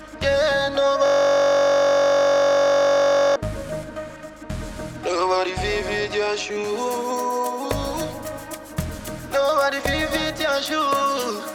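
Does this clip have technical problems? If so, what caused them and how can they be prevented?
Yes. There is a system hang loop from 1.06 s to 3.36 s. The computer or its audio driver stalled, but the sound hardware kept replaying the last block in its ring buffer. A single 21.33 ms slice of sound, which fits a 1024-sample buffer, repeats over a hundred times in a row. That produces a steady, rough buzz at about 47 Hz instead of the intended audio. To prevent it, keep the audio thread from being starved or blocked, and use a driver that outputs silence when the buffer isn't refilled.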